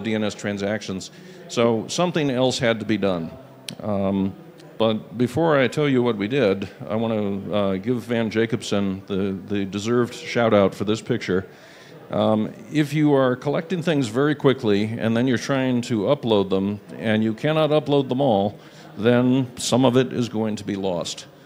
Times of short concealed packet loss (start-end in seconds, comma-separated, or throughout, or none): none